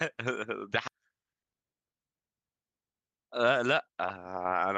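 At 0.87 s a skip ahead occurs: roughly 0.4 s of speech was dropped while later audio waited, so playback jumps forward with no gap, splicing the two sides together. From 2.71 to 4.59 s a jitter buffer speed-up trims short pitch-period pieces, removing about a fifth of a second; speech runs at 111% speed, sounding hurried at unchanged pitch.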